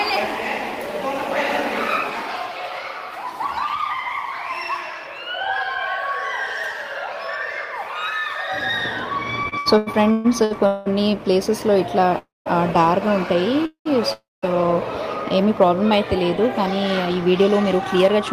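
A run of repeated stalls (stutter) breaks up the audio between 9.43 and 10.88 s: eight times the sound hangs on and smears forward before moving on, with the longest hold lasting 192 ms and about 600 ms of filler in all, so roughly 42% of that stretch is stretched-out continuation rather than fresh material. Nothing drops out, but the passage drags and judders, which points to packets repeatedly arriving later than playback needed them, draining the jitter buffer each time while the receiver extended the last sound. Three call audio freezes follow, at 12.18–12.48 s, 13.66–13.87 s and 14.13–14.44 s. In each, the sound smears into a decaying buzz or hiss, falls silent (for about 190 ms, 100 ms and 200 ms respectively) and then picks up exactly where it left off. Each inserts a pause of 274 ms, 197 ms and 291 ms with nothing lost, the likely cause being packets held up in transit long enough for the jitter buffer to run dry. 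From 16.74 to 18.19 s a jitter buffer speed-up makes the audio sound hurried at an unchanged pitch, running at about 106% speed as around a tenth of a second of short pitch-period slices is trimmed away to shed the excess buffered delay.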